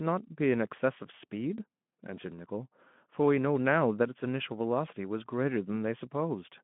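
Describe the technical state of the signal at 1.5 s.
At 1.5 s the speech is intact, with nothing beyond the light, steady colouring of the Speex codec path it travels through.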